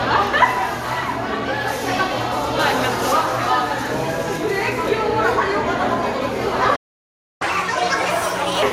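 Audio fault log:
Throughout: generation loss. The sound is swirly and hollow, with blurred attacks and nothing above 16 kHz. That points to repeated lossy passes, likely around five rounds through something like MP2 at 96 kbit/s, each requantising on a shifted frame grid so the damage stacks.
6.75–7.42 s: playback stall. The sound cuts out mid-flow for about 0.65 s of silence and then picks up where it stopped. The player likely ran dry of data or had its thread blocked until it caught up.
7.42–8.63 s: catch-up at higher speed. Right after the gap the sound plays at 1.5× speed, pitched up by roughly seven semitones. The player resamples its backlog to recover the lost time.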